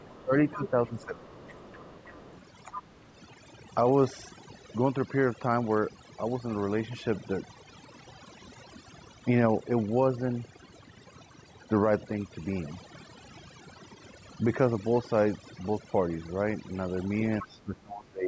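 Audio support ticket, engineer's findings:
Overdone noise removal, full clip: background pulled down, breaking up into twinkling specks; quieter syllable tails eaten. Noise reducer set too aggressive, driving individual frequency bands down or off whenever they sit near its noise estimate, taking low-level speech detail with them. Band limit around 8 kHz from call mic processing; expected, not a fault.

Speech suppressed in double talk, 0.00–1.49 s and 17.41 s to end: talker's voice dips and breaks up in pieces, roughly a second affected at the start, well under a second at the end. Deepest drop about 15 dB early, about 25 dB at the close. Likely echo canceller confusing near-end speech with loudspeaker echo during overlap and ducking both.

Other side's voice leaking through, 0.03–0.16 s, 0.63–2.41 s, 2.77–3.02 s, 17.42–17.59 s: second voice audible under the talker, in scraps, and as a longer stretch from 0.63 s. 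Faint at first, about 35 dB below speech, rising to about 25 dB below, then about 15 dB below at 2.77 s and 17.42 s. Likely residual far-end echo from the device loudspeaker not fully cancelled at the mic.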